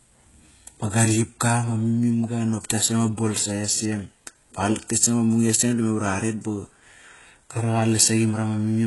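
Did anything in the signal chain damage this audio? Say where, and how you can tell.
Yes, the damage sits at the codec stage and runs through the whole speech clip, with the likely cause being HE-AAC compression at heavy settings. The s sounds come out gritty and lispy, and the upper register has a synthetic, metallic sheen, which fits a very low bitrate around 12 kbps. The treble there isn't the original: spectral band replication has copied lower bands upward under a coarse envelope, so harmonics fail to line up across the crossover. On a spectrogram, content stops dead at about 11.5 kHz, and the band below it shows smeared, repeated blocks of texture rather than clean harmonic lines.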